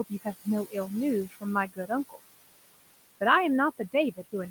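Noise suppressor artifacts run through the whole speech clip: the suppressor pulls the room noise, which sits about 14 dB below the speech, down by about 20 dB. Speech cut by the noise suppressor occurs at 0.09–0.47, 0.66–0.75, 1.28–1.44, 1.68–1.90 and 2.09–2.23 s, where quiet speech taken for noise drops by about 16 to 22 dB and sounds swallowed.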